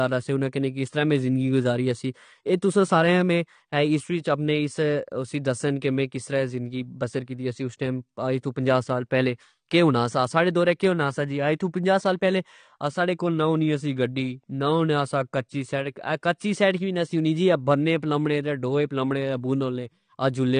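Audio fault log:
throughout, AAC compression: the speech sounds dull and smeared, with a fizzy, warbling edge on sibilants and nothing above 9.8 kHz. The likely cause is low-bitrate AAC-LC coding, fitting about 32 kbps, where the encoder drops the top band and coarsely quantises the rest.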